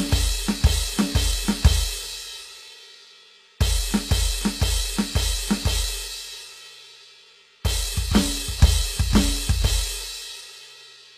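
Throughout the music, the likely cause is HE-AAC compression, which fits a low bitrate around 24 kbps, rebuilding the treble by copying lower bands upward. The damage is plainly audible: highs sound gritty and metallic rather than genuine, and nothing reaches above 14.9 kHz.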